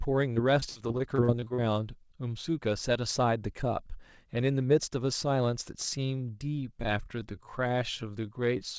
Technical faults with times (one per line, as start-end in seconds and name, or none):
0.34-1.60 repeated packet loss (robotic sound)
5.79-8.79 time-stretched section